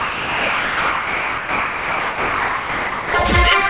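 From the start up to 3.14 s the sound is gone, replaced by steady comfort noise, and only the last half second or so comes through. That's most likely sound dropped by the voice detector, which treated the opening as background and stopped sending until it retriggered. Everything sits below 4 kHz, which fits a narrowband call codec like G.711.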